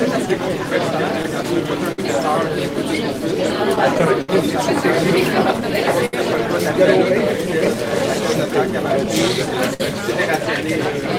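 A faint unsteadiness runs through the audio from 0.27 s to 11.02 s, as if the tempo keeps easing back: playback runs at about 99% speed, and the stretch gains roughly 150 ms in total. These are repeated timing corrections. The receiver keeps padding the signal with tiny repeated slices so it doesn't outrun its source. Each insertion is too small to stand out, so the edits come across only as a slightly loose, dragging rhythm.

The cause beneath them is clock drift between sender and receiver. The sender's clock runs a few percent slower than the receiver's, so the jitter buffer steadily drains. The receiver has to keep stretching the audio. The result is small hiccups at uneven intervals across the whole clip rather than one isolated glitch.

At 1.92 s the sound hangs for 59 ms, a brief held smear with a slight buzz or dip, then carries on from where it stopped. This is a short stall from a late packet. 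The buffer ran dry, so the receiver sustained the last sound until the data arrived. The same thing happens at 6.06 s, holding for 72 ms, and at 9.74 s, holding for 60 ms. None of these stalls loses any audio, but each one pushes everything after it later.

Between 3.53 s and 4.29 s the audio stumbles four times in quick succession, with 89 ms of held sound in all and the longest hold lasting 67 ms. That is about 12% of the span, enough to make the passage drag and stutter. These are repeated stalls, a stutter. Packets kept arriving more slowly than playback consumed them, the buffer emptied again and again, and the receiver bridged each gap by extending the preceding sound. Nothing is missing; the audio simply falls behind in jerks.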